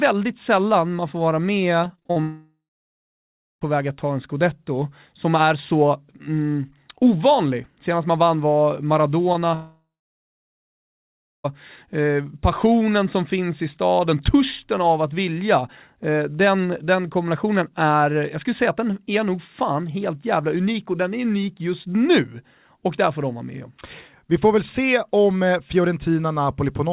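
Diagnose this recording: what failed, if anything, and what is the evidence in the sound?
Between 1.84 and 2.18 s, right after "sällan man får vara", the speech turns choppy and robotic, with seven short holes (the longest about 43 ms). Nearly half that stretch is the receiver repeating the last sound. This is repeated packet loss at the network stage.

A long network dropout occurs twice, at 2.22–3.63 s (ending just before "väg att ta en") and at 9.54–11.46 s. Each begins with a fading buzz, falls silent for about 1.0 s and 1.6 s respectively, then resumes with that audio missing. The likely cause is a network outage that outlasted the G.711 call path's jitter-buffer concealment.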